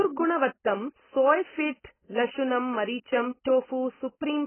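The whole clip sounds choked and dull. There's nothing above about 3.1 kHz, so the speech loses its air and sibilants turn into a fizzy, warbling smear instead of clean hiss. That pattern is most likely AAC compression, with AAC-LC squeezed hard enough to lower its cut-off. The heavy damage fits a very low bitrate, something around 12 kbps, where the encoder has far too few bits to spend.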